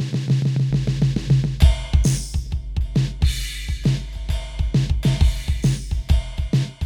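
Mains hum runs from 0.70 s to 6.02 s beneath the music: a steady 50 Hz drone with a few low harmonics stacked above it, sitting about 10 dB below the program, so it is plainly audible rather than buried. The power-line frequency has leaked into the signal path, most likely through a ground loop or a transformer close to the equipment, and it stays fixed in pitch and level throughout.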